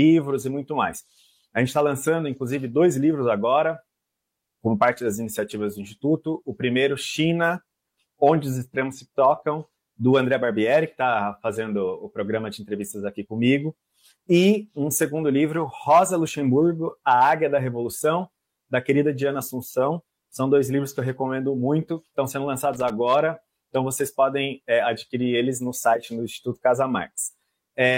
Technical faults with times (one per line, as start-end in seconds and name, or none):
22.73-22.90 loose connector crackle